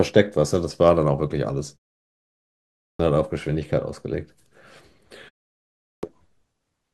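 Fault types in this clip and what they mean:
Clipped start after a pause: The output device goes idle during silence and is slow to wake. Sound resuming at 2.82 s, after a 1.12 s pause, loses its first 0.17 s. At 5.85 s, after a 0.63 s pause, 0.18 s is lost. Both onsets begin abruptly.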